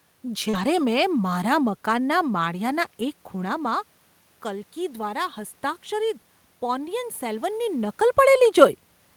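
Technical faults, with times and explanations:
0.49–0.55 s, short concealed packet loss: just before "મેં મારા મકાનના", about 40 ms of audio never arrived, and the receiver covered 36 ms by extending the preceding sound before blending back. It is heard as a brief smear or wobble, not the silent dropout of an unconcealed gap.
0.53–0.63 s, lost packet rebuilt from error correction: overlapping that spot, 60 ms of sound, which fits three lost 20 ms packets, was played from low-bitrate backup copies. It turns rougher and noisier, unlike concealment, which guesses at the sound rather than decoding a degraded version of it.
4.48–8.02 s, automatic gain rising: the level reaching the microphone fell by about 10 dB, and the gain control slowly raised its gain by about 3 dB. Voice and room noise swell together, which tells it apart from a talker simply moving closer.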